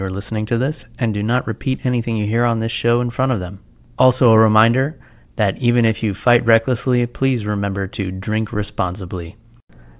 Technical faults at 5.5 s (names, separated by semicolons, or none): none